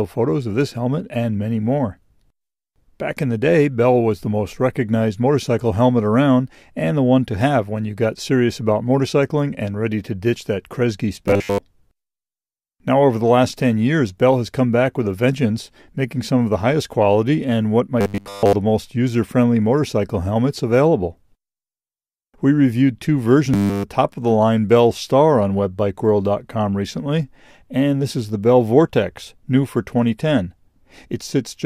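From 11.28 to 11.58 s, 18.01 to 18.53 s and 23.54 to 23.85 s the sound turns into a rigid metallic buzz at 100 Hz. This is robotic sound from repeated short buffers, likely the same 10 ms chunk looped while real audio is skipped. Most of the first two stretches and all of the last are repeats. Unlike mains hum, the buzz comes and goes with the damage.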